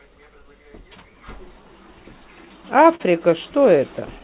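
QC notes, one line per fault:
Throughout: clock drift between sender and receiver. The sending end's clock runs about 4% slow relative to the receiving end, so the jitter buffer keeps draining rather than holding a steady depth. The receiver has to stretch the audio to avoid running dry. The result is a faint, persistent unevenness in pacing rather than any single obvious defect, heard over a G.711 mu-law band that already stops at 4 kHz.
0.13 to 2.84 s: repeated timing corrections. To compensate for the slow sender, the receiver plays this stretch at about 97% speed, inserting roughly 70 ms of extra material in small repeated pieces. Every correction pushes the same way, lengthening rather than shortening, but the pieces are unevenly spaced. The effect is a slightly dragging, unsteady tempo with occasional soft hiccups where a short segment is effectively doubled.
1.99 to 3.03 s: scattered short gaps. 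About five brief holes appear here, one at a time, totalling roughly 70 ms and filling around 7% of the span. The longest is about 40 ms. The receiver conceals each by extending the preceding sound, so nothing drops to silence. Instead there are brief smears and small ticks where the extended sound gives way to fresh audio, overlapping the end of the stretching above.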